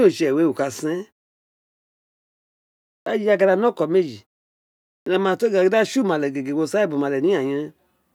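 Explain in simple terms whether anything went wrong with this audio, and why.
Clipped start after a pause, at 3.02 s and 5.02 s: after silences of about 2 s and 0.84 s, the playback device had dozed off and needed roughly 43 ms to wake, so the speech's first sounds vanish and it begins abruptly.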